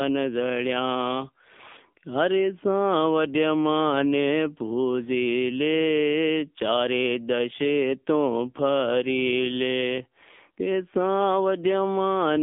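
From start to finish the speech has passed through the AMR narrowband mobile codec (AMR-NB). It was squeezed into a telephone channel and rebuilt from a vocal-tract model excited by sparse pulses. Nothing survives above about 3.6 kHz, and the line band runs from roughly 200 Hz to 3.5 kHz, so the sound is thin and boxy. The plainly audible buzzy, synthetic edge fits a low-rate mode near 7.4 kbps.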